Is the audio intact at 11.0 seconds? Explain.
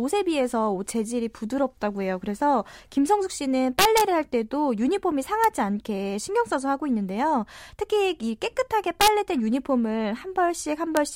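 No. At about 10.97 s there is an integer overflow. A speech peak pushed a sum past the largest representable integer, and instead of being held at the limit it wrapped to the opposite sign. Overdrive was about 0 dB, so only the very tip crossed. It is heard as a brief, violent crack, sharper than clipping. On a waveform, a sample jumps abruptly from a large value of one sign to a large value of the other. A spectrogram shows a thin broadband vertical stripe.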